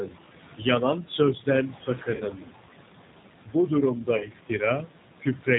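A speech recording carried over a G.729 codec link, the audio sounds band-limited and slightly rough, with nothing above 4 kHz. The buzzy, synthetic edge on the speech comes from a model-based 8 kbit/s coder, not from plain low-pass filtering. Running through the whole clip are noise suppressor artifacts. The room noise, about 11 dB under the speech, is pulled down by about 20 dB in the gaps and swells back beneath the speech. VoIP packet loss concealed by the speech codec appears from 2.15 to 2.24 s and again from 4.18 to 4.26 s, covering 50 ms and 20 ms of lost audio. Instead of a hard dropout or click, each gap is filled by stretched sound that fades, and the speech stays weak for a short while afterwards. Speech cut by the noise suppressor hits from 3.45 to 3.72 s and from 3.94 to 4.93 s, with drops of about 19 and 21 dB over roughly a sixth and most of a second of sound. Soft parts are swallowed along with the background, which a level dip from the talker would not do.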